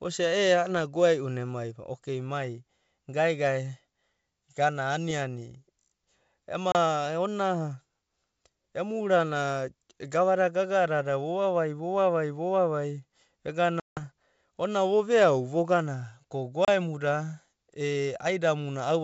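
At 6.72, 13.80 and 16.65 s (after "veau vogana ko"), packet loss on the ADPCM call leaves hard silent gaps of 30, 170 and 30 ms. Unlike a plain dropout, the sound comes back slightly distorted until the decoder's predictor resynchronises.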